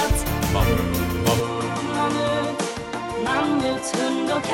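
At 1.40 s the sound turns duller and drops roughly 5 dB in level, with no gap at the change. Nothing remains above 11.4 kHz and a faint new noise floor appears, well below the signal. This points to an input switched to a poorer device, likely mid-recording, lasting to the end.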